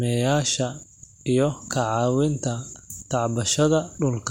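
The speech recording carries no audible technical faults anywhere in the signal.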